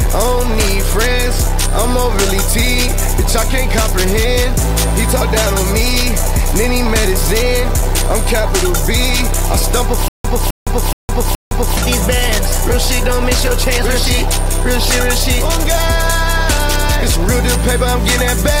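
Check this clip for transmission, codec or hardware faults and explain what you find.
One transmission fault is present: a stutter with silent gaps from 10.08 to 11.77 s. A short fragment of about 260 ms plays, drops into roughly 163 ms of dead digital silence, then returns, four times at an even period of about 423 ms. The likely cause is a stalled player or stream that replays its last buffered fragment on each retry and then runs dry, so the audio meant for that span is lost.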